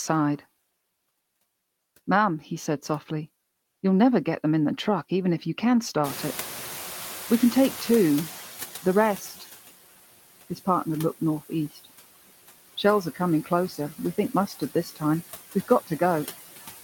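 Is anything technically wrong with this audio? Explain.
Yes, there are noise suppressor problems throughout. Noise suppressor artifacts run through the whole clip: it's pulling steady noise down about 14 dB frame by frame, so the background dips between phrases. Around 6 s the room noise jumps by about 24 dB, and the noise suppressor is catching up from 6.04 to 9.39 s. Its estimate takes about 3.35 s to adapt, so the noise comes through louder before settling to about 11 dB of reduction. There's also speech cut by the noise suppressor at 13.69 to 13.79 s (about 10 dB down) and 14.47 to 15.01 s (about 12 dB down). In these cases the suppressor mistook about 0.1 s and 0.15 s of speech for noise, leaving those bits swallowed and faint.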